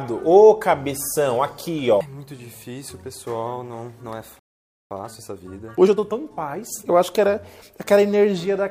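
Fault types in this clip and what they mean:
Playback stall: from 4.39 to 4.91 s the sound cuts out mid-flow and the output goes silent for about 0.51 s before resuming. The likely cause is the player running short of data or its output thread being blocked, so nothing reached the output until it recovered.
Time-compressed catch-up: from 4.91 to 6.95 s the audio runs hurried at 1.25 times normal speed while keeping its pitch. The player is working off the backlog from the stall by dropping small slices and cross-fading across the joins.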